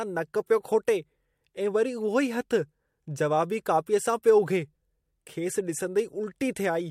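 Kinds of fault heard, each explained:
Nothing here stands out as a technical fault; the speech simply comes through without anything catching the ear.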